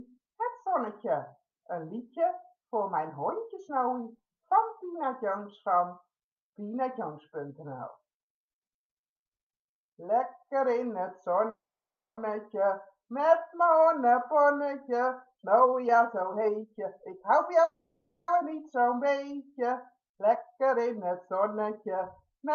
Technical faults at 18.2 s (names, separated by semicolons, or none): call audio freeze